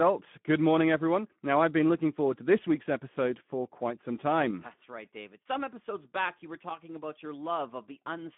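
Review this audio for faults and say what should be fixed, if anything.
Speex codec damage runs through the whole clip. The speech sounds hoarse and noisy because the CELP excitation gets too few bits. It is band-limited to about 150 Hz to 3.5 kHz, with nothing above 3.8 kHz. This points to a narrowband mode near 11 kbps. To prevent it, capture or send with a wideband codec such as Opus at a higher bitrate.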